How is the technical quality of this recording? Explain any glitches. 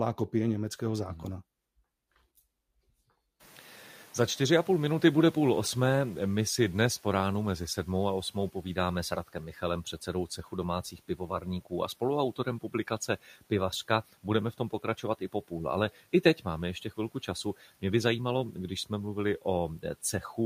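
The recording has two noise-suppression glitches, and the room noise jumps by about 24 dB near 3.5 s.

From 3.40 to 7.88 s, just before "a osmou", the noise suppressor is catching up. Its noise estimate trails the rise, so noise leaks through and then sinks by about 8 dB over roughly 4.5 s. On a spectrogram, this looks like a noise floor fading gradually.

From 10.83 to 11.45 s, between "předsedou cechu" and "a spoluautorem", the noise suppressor cuts speech it mistook for noise. About 150 ms in total sounds swallowed, dipping by up to about 12 dB. The waveform shows notched, thinned envelopes.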